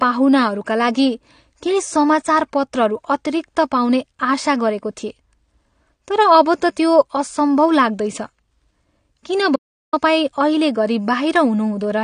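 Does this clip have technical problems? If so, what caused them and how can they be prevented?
Yes. The speech is dull and smeared throughout, and nothing reaches above 9.7 kHz. The codec damage is plainly audible. The likely cause is AAC compression, AAC-LC at a low rate that fits about 32 kbps, lowering the cut-off and quantising coarsely. Encode at a higher bitrate.

From 9.56 to 9.93 s the sound cuts to silence, with no room tone. About 0.37 s of speech is gone. This is an audio dropout to silence, likely from a lost input while the recorder kept writing silence. Secure cables and monitor input during recording.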